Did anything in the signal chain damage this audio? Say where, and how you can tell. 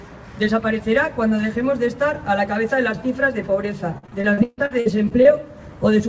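Yes, the network stage damaged it, with repeated packet loss (robotic sound) from 3.98 to 5.27 s. Eleven gaps, the longest 142 ms, are patched by stretching the previous sound, so about a third of that stretch is concealed, which makes it choppy. A spectrogram shows frozen, smeared frames alternating with breaks. The waveform shows copied cycles in the same places.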